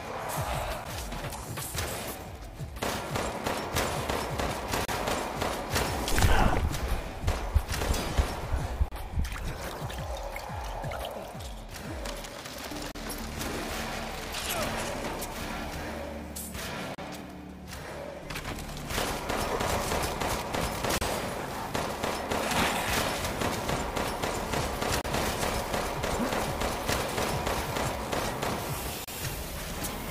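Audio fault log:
0.84, 4.85, 8.88, 12.92, 16.95, 20.98, 25.01, 29.04 s: gap at a join of encoded pieces. Short silences repeat every 4 s, 11 ms at the first join and 32 ms at each later one. Each separately encoded piece keeps its start delay and end padding, so the sound stops abruptly with smeared edges, then resumes where it left off.
6.88, 19.92 s: dropped buffer (overrun). The sound jumps forward with no silence, losing a few milliseconds at the first point and under two at the second. The likely cause is samples overwritten before being read, leaving a direct splice.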